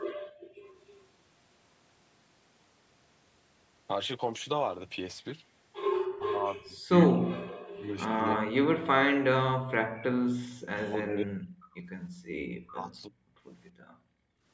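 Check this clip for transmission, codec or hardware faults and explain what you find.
The clip has three echo-canceller problems: the room sound gets gated, a faint echo slips through once, and the speech is repeatedly pushed down during double talk.

Background gated by the echo canceller, at 0.12 to 0.64 s, 12.1 to 12.35 s and 13.71 to 14.45 s. While the far end's audio was playing, the canceller clamped the mic by about 40 dB, so the room tone suddenly goes dead and then comes back when it releases.

Echo leak, from 0.77 to 1.07 s. There's a faint delayed copy of the sound, roughly 30 dB under the speech and trailing by about 312 ms. That's likely the far side's loudspeaker audio that its canceller didn't fully remove, getting sent back.

Speech suppressed in double talk, at 6.13 to 7.51 s, 7.71 to 10.19 s, 10.9 to 11.8 s and 12.63 to 13.13 s. The speech dips hard, around 40 dB at its worst. 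That's likely the canceller mistaking the talker for echo while both sides spoke and turning everything down.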